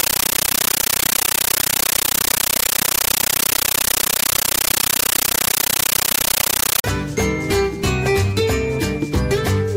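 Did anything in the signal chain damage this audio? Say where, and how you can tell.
Yes, at playback on the digital link. From 0.0 to 6.84 s, chattering static replaces the sound. It is a compressed stream played as audio. Undecoded frames were treated as samples. Noise bursts of 13.3 ms repeat at 31.25 Hz, which fits a 640 kbps AC-3 stream.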